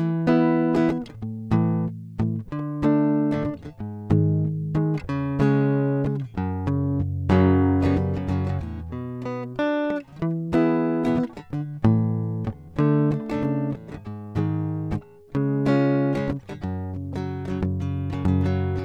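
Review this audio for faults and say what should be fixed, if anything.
Nothing to fix: no faults detected in the music, so no corrective action is needed.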